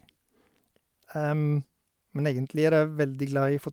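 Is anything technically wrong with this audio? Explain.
Yes. Throughout the speech there is clock drift between sender and receiver: the sender's audio clock runs roughly 3 percent slow relative to the receiver's. Because fewer samples arrive than the receiver consumes, its jitter buffer steadily drains, and the playback side has to compensate continuously rather than once. The result is a delivery whose timing never quite settles, with small irregular hitches distributed across the whole recording instead of a single audible glitch.

From 0.12 s to 3.41 s the receiver makes repeated timing corrections to keep pace with the slow sender. They all run in the same direction, stretching the audio by repeating short pieces so that playback proceeds at about 97 percent speed. Over that stretch they add around a tenth of a second. The edits are unevenly spaced and individually small, so they are heard as faint hiccups and a slightly dragging, unsteady tempo.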